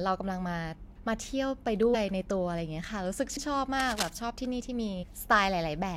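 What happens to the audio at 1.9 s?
At 1.93 s the speech jumps forward: a few compressed frames were skipped, so roughly 70 ms of audio never plays. The frames were either missing from the stream or rejected by the decoder as damaged, and playback resumes at a later frame boundary. The join is heard as the speech jumping ahead, not the silent gap of a dropout.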